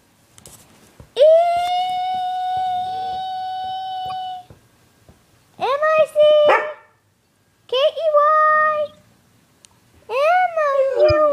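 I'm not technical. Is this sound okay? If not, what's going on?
No. Short chirps or squeaky bursts of noise appear at 4.08–4.12, 8.86–8.95 (faint) and 11.06–11.12 s (loudest). Each is a corrupt frame decoded: damaged data played anyway.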